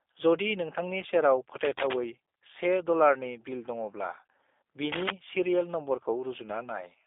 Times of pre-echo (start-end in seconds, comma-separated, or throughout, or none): none